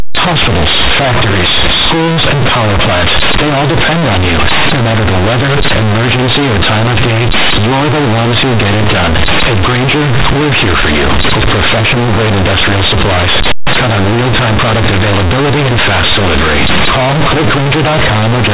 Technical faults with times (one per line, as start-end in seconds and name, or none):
0.00-18.54 companded audio read as linear